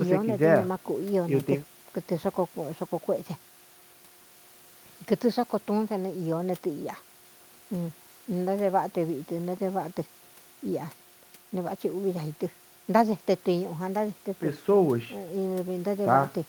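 No dropouts, clicks, distortion or other technical faults turn up anywhere in this speech recording.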